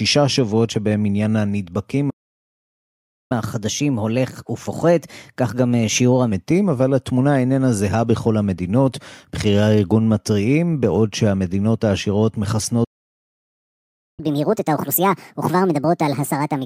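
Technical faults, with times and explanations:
2.10–3.32 s and 12.84–14.20 s, playback stall: the sound cuts off mid-flow for about 1.2 s, then 1.34 s, likely because the player ran dry of data or its thread blocked. The waveform shows flat silent gaps, and the spectrogram shows blank columns with hard edges.
3.32–6.32 s and 14.20–16.65 s, catch-up at higher speed: after each stall the backlog is resampled faster to recover lost time. The first runs at 1.1× and about a semitone and a half sharp. The second runs at 1.5× and roughly seven semitones up until the end. On the spectrogram, harmonics shift upward and syllables compress in time.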